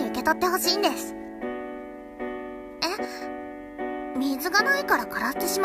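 At 3.05 s the level drops abruptly by about 6 dB and stays down until 3.22 s, then snaps back. The likely cause is one channel dropping out: with a stereo feed summed to mono, losing one side halves everything common to both and removes anything present only in the missing side. On a waveform this shows as a clean rectangular step in amplitude. A spectrogram shows a uniform dimming across all frequencies over those 0.17 s.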